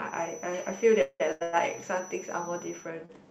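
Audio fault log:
0.00 to 2.94 s, feedback whistle. A thin, steady tone near 5.9 kHz sits behind the speech, around 20 dB below it, and swells and fades slowly in level. It stops at 2.94 s. The likely cause is a loudspeaker-to-microphone loop running just at the edge of feedback. At that edge, one high frequency keeps ringing without growing into a howl. The whistle is narrow and constant, unlike the broadband codec hiss.
1.01 to 1.22 s and 1.43 to 1.55 s, call audio freeze. In the first event, the last sound is drawn out as a fading buzz or hiss for about 184 ms. Its final 40 ms are silent. In the second event, a similar fill lasts about 101 ms with no silent stretch. Speech then resumes where it broke off, so nothing is lost. The timing is simply pushed later. Packets held up in transit and an emptied jitter buffer are the likely cause.
1.32 to 1.43 s and 3.06 to 3.11 s, short stall from a late packet. 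A sound is held too long, by 89 ms and then 35 ms. Each time, a packet missed its turn and the jitter buffer ran dry. The receiver prolonged the last sound until the packet landed, then carried on from the same point. No speech is dropped, only delayed. The first stall leads straight into the second freeze.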